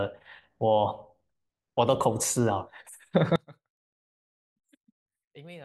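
From 3.36 s to the end, the speech drops to a faint remnant about 24 dB quieter, its centred body nearly gone. The likely cause is one channel inverted: one side's reversed polarity cancels the shared centre when summed to mono.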